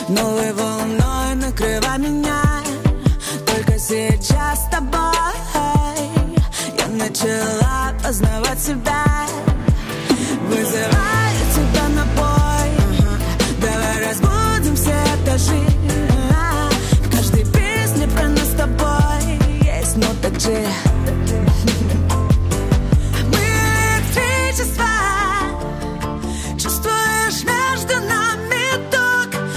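No technical faults can be heard anywhere in the audio; the signal stays continuous and steady throughout.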